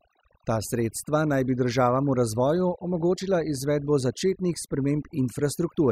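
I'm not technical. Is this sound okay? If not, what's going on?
No. From start to finish this speech has overdone noise removal: pauses drop to near silence with twinkling specks, unlike ordinary hiss, which stays a steady, even background.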